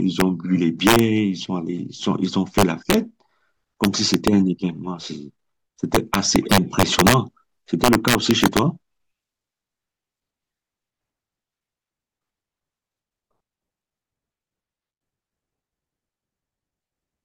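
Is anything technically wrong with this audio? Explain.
Yes. Integer overflow at 0.20 s, 0.87–0.99 s, 2.59–2.94 s, 3.84–4.28 s, 5.95–7.14 s and 7.84–8.59 s: speech peaks pushed about 1 to 5 dB past full scale wrap to the opposite sign instead of limiting, producing violent cracks harsher than clipping.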